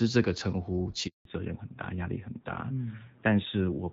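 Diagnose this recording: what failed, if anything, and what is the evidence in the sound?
Network stage: there's a handover gap from 1.07 to 1.25 s. The speech drops out almost instantly and stays dead silent for about 180 ms. That's the signature of the call being passed between networks while no speech frames get through. Nothing is concealed or smeared across the hole. The audio just stops and picks up again once the new link is carrying frames, and whatever was said in that window is gone.

Codec stage: right as the sound comes back at 1.25 s, there's a fallback to narrowband, and it holds to the end of the clip. Before the gap you can hear HD Voice-style wideband, clear with only light coding wear, which fits AMR-WB at around 12.65 kbit/s. Afterwards nothing is left above 4 kHz, so the speech goes duller and rougher. That points to the new link renegotiating down to AMR-NB, with the rougher texture fitting a rate around 7.4 kbit/s.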